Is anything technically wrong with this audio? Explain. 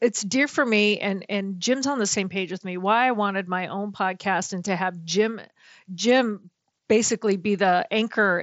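No, this is speech carried over a Bluetooth mSBC headset link that is working as intended, with the audio band reaching up to 8 kHz and only the light grain this wideband codec leaves on louder passages.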